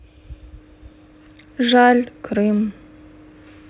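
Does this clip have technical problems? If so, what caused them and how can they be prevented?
No, the speech shows no technical faults; it has come through a WebRTC call path using G.711 A-law at 64 kbps, so nothing is heard above 4 kHz, which is normal for that narrowband codec.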